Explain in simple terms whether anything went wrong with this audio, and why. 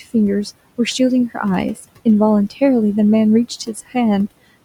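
Noise suppressor artifacts run throughout the speech: a filter keeps turning the steady room hiss down in pauses and letting it back up under talking, so the background pumps.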